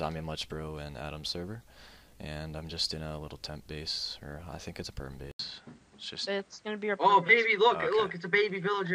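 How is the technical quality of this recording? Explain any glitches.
Quality drops partway through. Input switched to a poorer device at 5.31 s: after an 80 ms gap, the sound turns duller, capped near 9.2 kHz with fresh low background noise, likely from a lower-grade microphone.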